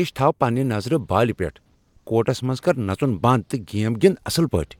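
A speech recording with no audible technical faults. Nothing in the signal calls for comment.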